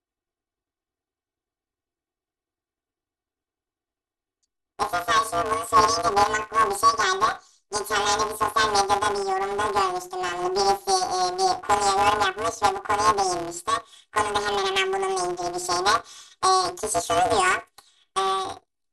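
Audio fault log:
Throughout: planar audio read as interleaved. Each block of samples that should hold all of one channel followed by all of the other is being read as alternating left-right pairs, so every block plays back at double speed, first one channel and then the other. The blocks here are about 5.33 ms long, which fits a 256-sample block. At that size the speech carries a robotic buzz at the 188 Hz block rate rather than an audible octave shift.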